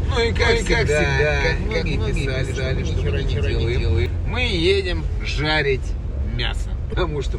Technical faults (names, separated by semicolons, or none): doubled audio track; damaged data in a compressed stream